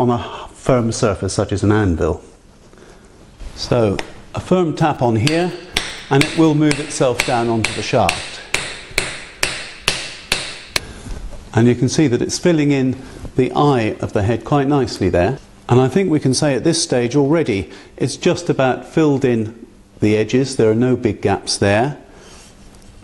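From 4.80 to 6.47 s come GSM signalling bursts: a nearby 2G phone's short bursts, rectified by the audio circuit into a galloping dit-dit-dit of 217 Hz buzzes about 30 dB below the sound. A spectrogram shows clustered harmonic combs; the waveform, small pulse trains.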